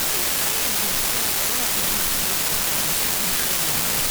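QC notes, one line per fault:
Throughout, unreliable data bit: a steady crackle and fizz sits under the speech and carries on through the pauses, where a clean recording would fall silent. One bit flips in a random share of the samples, and every flip adds a spike of the same size, about -10 dBFS. The spikes are all the same height and don't follow the signal level, so this isn't clipping or level-driven distortion. It also doesn't drop out between phrases, so it isn't a gated or program-dependent noise.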